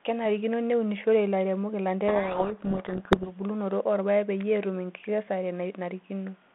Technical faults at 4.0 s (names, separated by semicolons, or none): none